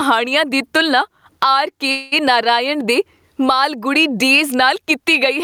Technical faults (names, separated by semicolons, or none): gain pumping; call audio freeze